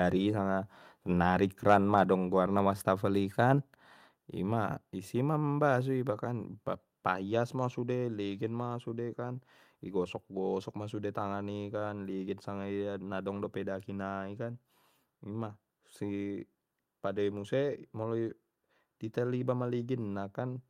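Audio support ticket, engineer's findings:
Microphone overload, 1.70–1.75 s, just after "sanga nari". Harsh crackle on the loudest peak, tops flattened about 3 dB past full scale, a few percent of samples. Likely cause: mic input gain set too high, driving the converter into clipping.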